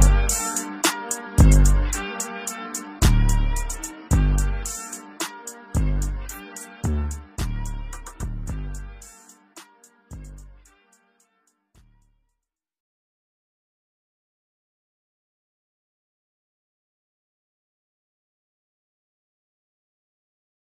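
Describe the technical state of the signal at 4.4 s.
At 4.4 s the signal is intact, with no dropout, click, distortion or other fault at that point.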